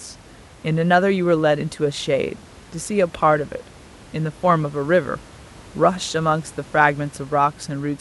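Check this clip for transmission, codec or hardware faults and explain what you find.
Nothing stood out on listening; the only thing beneath the speech is the room's own background noise, sitting about 24 dB lower.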